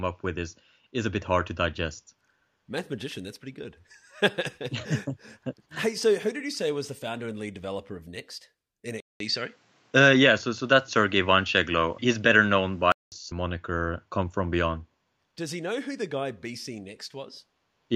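At 9.00 s, after a 200 ms waveform gap, speech dulls, the spectrogram blank above 8.3 kHz until 13.12 s: likely an input switched to a poorer device.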